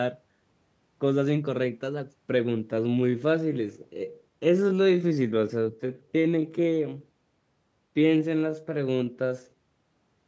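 Speech here, and from about 2.61 s through to the end it turns into a time-stretched section: the pace drops to roughly 0.68x with the pitch unchanged, so it drags. That's likely software padding the audio to a length by repeating short slices. The call microphone processing tops out around 8 kHz, as expected.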